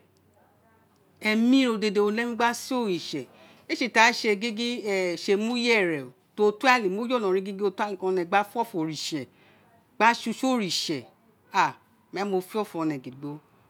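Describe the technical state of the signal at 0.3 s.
At 0.3 s the signal is intact, with no dropout, clipping, distortion or other audible fault at that point in the speech.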